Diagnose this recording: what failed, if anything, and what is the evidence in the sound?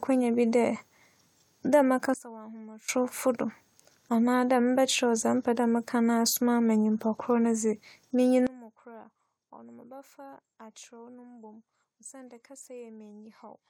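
The level of the speech and its background noise drops abruptly, by about 20 dB, at 2.14 s, returns at 2.89 s, then falls again by about 23 dB at 8.47 s and stays down to the end. These are sudden gain jumps, with both signal and noise floor stepping together from one sample to the next. The stage is likely digital processing downstream of the converter, where a gain setting or bit shift was applied without a ramp.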